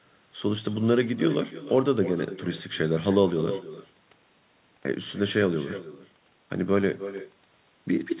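Speech, with echo with no canceller running throughout. Each phrase returns about a third of a second later, about 13 dB down and thinner, as if the far end's loudspeaker is feeding its microphone unchecked. The telephone-band sound, with nothing above 4 kHz, fits a G.711 narrowband call path.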